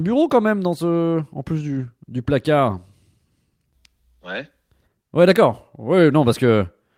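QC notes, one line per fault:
1.79–1.85 s, lost packet rebuilt from error correction: between "dans ce en plus" and "du placard" the speech carries on without a break but turns briefly rough and grainy. The sound fits about 40 ms of lost audio, likely two 20 ms packets, being played from the low-bitrate copies carried in the following packets. The waveform shows no gap, while the spectrogram shows a short noisier, smeared patch with blurred harmonics.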